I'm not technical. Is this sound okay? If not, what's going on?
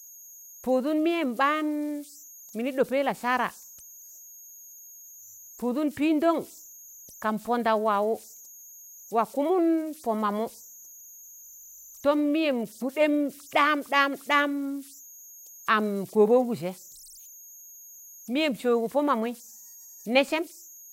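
No. The recording chip falls into repeating patterns, producing converter idle tones: a high whistle, around 7 kHz, running through the whole speech clip, clearest in pauses.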